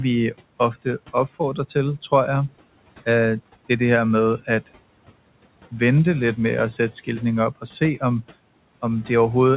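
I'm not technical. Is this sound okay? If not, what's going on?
No. Throughout the clip you can hear noise suppressor artifacts. The call software tries to remove the steady noise of the room by turning down the parts of the sound it judges to be noise. It cuts hard, so the background drops away in the pauses and comes back underneath each phrase, and the speech can sound a little thin. The narrow, phone-like sound, with nothing above 4 kHz, comes from the call line itself.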